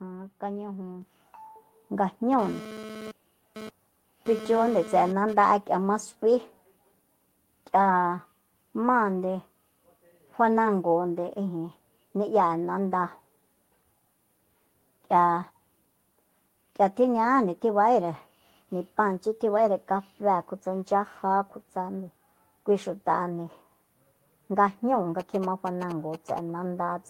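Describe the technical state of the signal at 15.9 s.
At 15.9 s the speech signal is intact, with no audible fault at that point.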